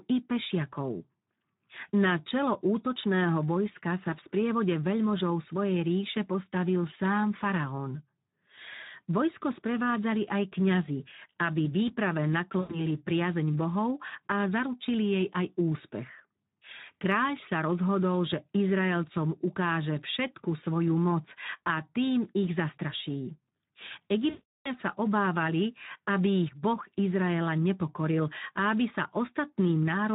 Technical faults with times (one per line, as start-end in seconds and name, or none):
0.00-30.15 Speex codec
12.59-12.79 VoIP packet loss concealed by the speech codec
24.30-24.68 VoIP packet loss concealed by the speech codec